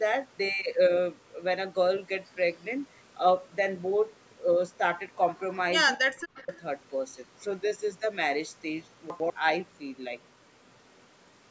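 From 5.97 to 6.51 s the speech sinks sharply, by about 40 dB at its deepest, for roughly half a second, then returns. This is speech suppressed in double talk, likely caused by an echo canceller that could not tell this talker from the far side's loudspeaker echo and turned both down together. Unlike a dropout or packet loss, the level is pulled down and then restored in a ducking shape, and the audio around it stays intact and in order.

Overlapping the end of that dip, from 6.39 to 6.61 s, a faint delayed copy of the speech comes through about 25 dB below the direct sound, trailing it by 220 ms. This is echo leak, likely from a far end on loudspeaker whose canceller let part of its microphone pickup return. A fixed 220 ms lag and a quieter duplicate separate it from room reverberation, which blurs smoothly rather than repeating.

At 9.1 to 9.3 s one 100 ms chunk plays one position late, swapped with the chunk that should follow it. 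This is chunks out of order. Nothing is missing, but the sequence jumps back and forward, giving a brief jumbled stumble at the hard joins. That stumble distinguishes it from a gap or a repeated fragment.

At 10.93 to 11.03 s the echo leak recurs, again 220 ms behind the speech but much fainter, about 40 dB down. The call microphone processing, with nothing above 8 kHz, is working normally.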